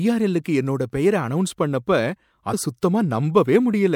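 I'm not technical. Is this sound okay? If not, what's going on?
No. The recording was saved in a compressed format, and a small piece of that stored data got damaged. This is damaged data in a compressed stream. When playback reaches the broken bit, the player can't make sense of it and has to find its place again further on. In this speech clip that happens between 2.50 and 2.54 seconds, where a brief glitch, like a chirp or blip, interrupts the sound.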